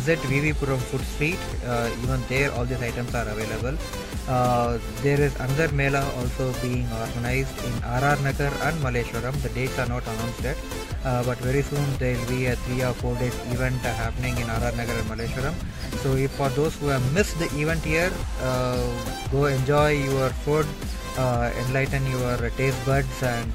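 No technical faults are audible anywhere in this audio.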